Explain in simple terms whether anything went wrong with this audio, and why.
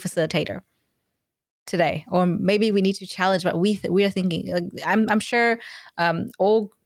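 Nothing went wrong here.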